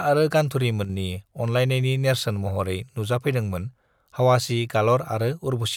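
A speech clip with one channel drop-out from 0.85 to 0.9 s. The level dips abruptly by about 6 dB, likely because one stereo side vanished before the mono sum.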